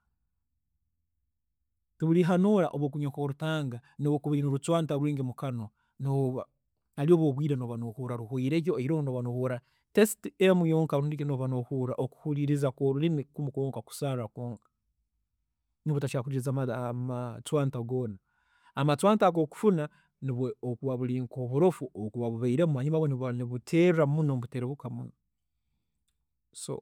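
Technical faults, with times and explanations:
Nothing here to flag: the speech comes through without any technical faults worth a time stamp.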